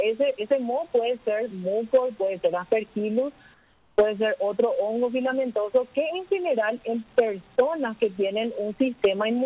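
Between 3.54 and 3.98 s, a pause of 440 ms, the real background is swapped for comfort noise in place of the background, likely because the sender's voice detector stopped transmission during the quiet stretch and the receiver filled the gap with its own synthetic noise. The background here sits about 33 dB below the loud parts, and the substitute is about 4 dB quieter still: a flat, featureless hiss that lacks the original background's texture until the sound resumes. The whole clip is band-limited to 4 kHz, which fits a narrowband G.711 call path.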